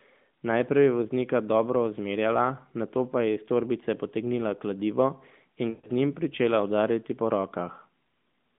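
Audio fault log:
5.70–5.89 s, lost AMR speech frames: failed frames forced the narrowband decoder to repeat and fade the last sound for about 140 ms before "z njim pričela udarjati".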